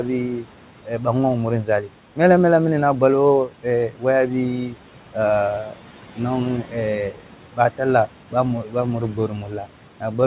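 Speech with a room-noise floor sitting about 17 dB below the voice has a background that pumps with the talking: it sinks by about 12 dB in the gaps and swells back under each phrase. These are noise suppressor artifacts. A suppressor judges each frequency band frame by frame, and every band it reads as steady noise gets pulled down, so the noise floor rides up and down with the speech rather than staying put.

The same process also produces speech cut by the noise suppressor. Soft sounds go dull and swallowed from 0.37 to 1.06 s, from 1.64 to 2.18 s (just before "mela mela mini na"), from 3.48 to 4.04 s, and from 4.69 to 5.16 s, with drops of about 10 to 13 dB. Across 5.7 to 10.03 s, scattered moments adding up to well under a second are lowered by about 12 dB. In each case the suppressor mistook quiet consonants or word endings for background noise and turned them down with it. The call path's band limit at 4 kHz, which fits G.711 A-law, is audible as a narrowband telephone tone.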